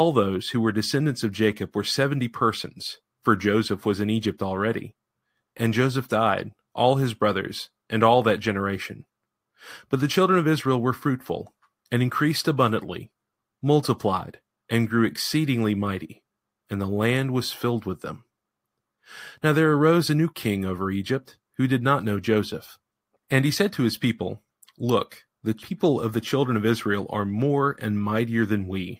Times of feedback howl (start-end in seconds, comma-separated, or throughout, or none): none